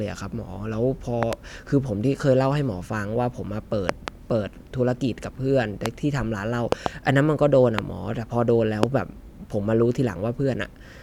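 Loud pops break into the speech six times. Double pops fall at 1.23 to 1.35 s, 3.89 to 4.10 s and 6.72 to 6.88 s. Single pops come at 5.86 to 5.88 s, 7.79 to 7.81 s and 8.83 to 8.85 s. Each peaks around 20 dB above the speech. They sound like sharp thumps laid over the talking, which carries on beneath them. The likely cause is a sudden electrical step or spike entering the chain.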